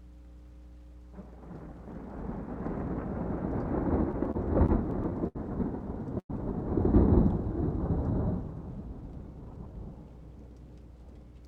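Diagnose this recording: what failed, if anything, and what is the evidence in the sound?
A steady low tone at 60 Hz sits under the whole recording, around 20 dB below the wanted sound. This is mains hum from the analogue wiring stage: a ground loop or nearby transformer is coupling the power line into the signal before conversion.

Between 4.11 and 5.37 s the sound drags and catches in eight short stalls, the longest 76 ms, adding 176 ms of filler, about 14% of that stretch, with nothing lost. These are repeated stalls (stutter) at the network and jitter-buffer stage. Packets arrived late, the buffer kept running dry, and the receiver extended the last sound each time until data resumed.

At 6.19 s the sound holds briefly and then drops to silence for about 70 ms, a 103 ms pause in all before it resumes exactly where it stopped, at 6.31 s. This call audio freeze was likely caused by packets held up in the network, emptying the jitter buffer and pushing the playback delay later by the same 103 ms.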